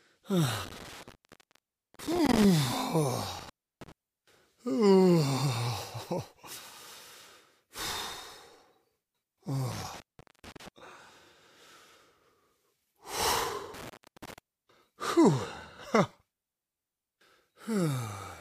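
An intermittent contact drops the signal four times: from 0.64 to 2.44 s, with the line open for about 0.9 s; from 3.39 to 3.92 s (0.32 s open); from 9.72 to 10.68 s (0.44 s open); and from 13.74 to 14.38 s (0.33 s open). Each time a loose plug or cable connection briefly breaks, the sound cuts out, crackle marks the break and the return, and faint hiss remains while the circuit is open.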